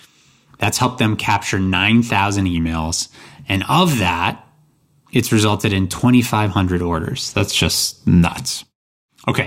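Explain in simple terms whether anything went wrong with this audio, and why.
Twice the speech slows and drops in pitch together, from 2.54 to 3.23 s and again from 6.94 to 9.42 s, then snaps back to normal. Each time it plays about 5.5% slower and sits almost exactly a semitone flat. This is likely a drift correction step: software keeping two clocks in line briefly changed the playback rate to refill its buffer, shifting speed and pitch as one.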